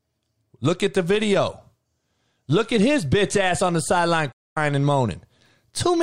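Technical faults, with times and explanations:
4.32–4.57 s, playback stall: the player likely ran short of data, so output cuts to silence for about 240 ms right after "ass on the sideline" before the speech resumes.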